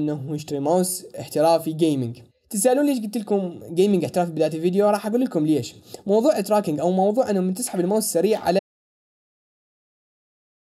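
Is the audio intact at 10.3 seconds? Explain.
No, at 10.3 seconds you're inside an audio dropout to silence that starts at 8.59 s and runs to the end. The sound cuts off mid-flow into silence with no room tone, likely because the input dropped while recording continued.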